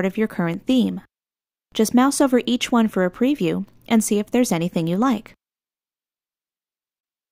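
At 0.54 s and 4.27 s, a block of digital silence of about 1.45 ms drops the sound out, which fits a 64-sample buffer left unfilled, and each one registers as a tick or dip.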